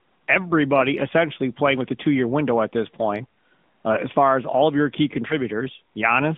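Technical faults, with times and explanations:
Throughout: AMR narrowband mobile codec. The speech sits in a band from about 150 Hz to 3.6 kHz with nothing above, because the codec samples at 8 kHz. Rather than storing the waveform, it rebuilds the voice from a vocal tract model excited by a few pulses per 5 ms subframe. That gives a plainly audible buzzy, synthetic edge, and the amount of damage fits a mid-rate mode of around 10.2 kbps.
5.28 to 5.34 s: lost AMR speech frames. Just after "all of your key" there is a brief dip or warble lasting about 20 ms, consistent with a single frame failing its checksum over the radio link. The decoder covered the gap by repeating the previous pitch and vocal tract settings at reduced gain. This produces a short smeared blip rather than silence, and the voice sounds briefly weak or rough as it resumes.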